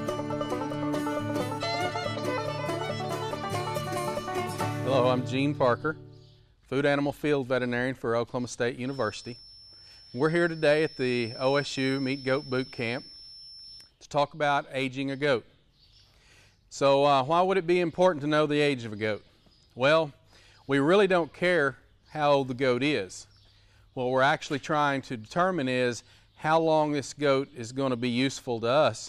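From 8.81 to 13.94 s, the loudspeaker-to-microphone loop likely sits right at the edge of feedback, sustaining a single 5.4 kHz tone that never runs away. The result is a feedback whistle: thin, steady, well below the sound, swelling and fading slowly in level.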